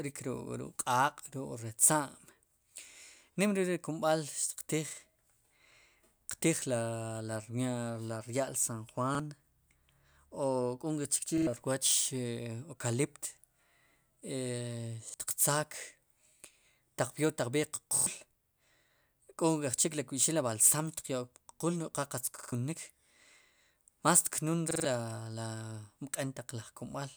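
Repeated buffer stutters occur at 9.15, 11.38, 15.09, after "taq b'eer" at 17.97, after "qa qatz" at 22.38, and after "más tknun" at 24.71 s. Audio arrived late, so a 46 ms block was replayed one to three extra times, which fits a 2048-sample buffer. Waveform and spectrogram show identical copied tiles separated by hard vertical seams.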